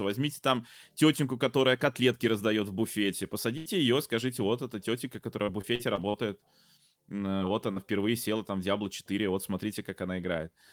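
At 3.57 to 3.68 s, just after "котлетки раздает в буфете", there is a burst of packet loss. About 80 ms of audio never arrived, and the receiver extended the last sound while fading it. The result is a brief held, decaying sound before the speech resumes at "ее скажите вот эта" with that stretch missing.

From 5.44 to 6.16 s, following "скажите вот эта тетенька", repeated packet loss produces a choppy, robotic quality. Five separate gaps, the longest 46 ms, total about 160 ms. Concealment patches fill roughly a fifth of the span, so the speech comes through in broken fragments.

Short concealed packet loss occurs at 7.38 to 7.42 s and again at 7.72 to 7.78 s, with 20 ms and 40 ms lost respectively. Each hole was filled by extrapolating the preceding sound and then crossfading back into the real signal. Each is heard as a quick smear or wobble in the speech.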